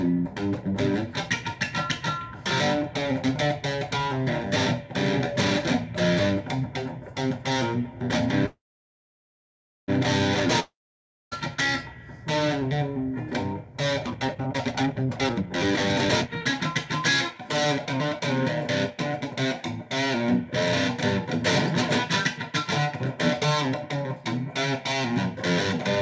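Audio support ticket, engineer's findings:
Call audio freeze, 8.46 to 9.90 s. Last sound carries on as a fading buzz, then about 1.29 s of silence. Likely cause: packets delayed, jitter buffer ran empty. Audio resumes where it stopped. Nothing lost, 1.42 s of delay added.

Long network dropout, 10.60 to 11.33 s. Same fading tail, then about 0.59 s of silence. Probable component: network path, no packets arriving. Audio returns further on. About 0.72 s never played, so a chunk is skipped.

Jitter buffer speed-up, three stretches. 14.07 to 16.30 s runs at 157% with pitch unchanged, about 1.5 s removed, clearly hurried. 16.85 to 18.46 s at 105%, about 0.1 s removed. 18.91 to 19.61 s at 106%, about 0.05 s removed. Buffer held more audio than its target. Receiver trimmed pitch-period slices to cut the delay. G.722 call path at 64 kbps, with no content above 8 kHz.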